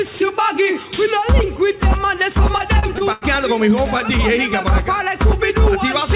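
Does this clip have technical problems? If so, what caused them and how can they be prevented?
Yes. Repeated packet loss (robotic sound) runs from 2.58 to 3.23 s. Four gaps open in the stream, the longest about 90 ms. Each is patched by extending the preceding sound, so roughly a quarter of that stretch is concealed and comes out choppy, with pieces missing. A steadier network connection, with forward error correction and a deeper jitter buffer, would prevent it.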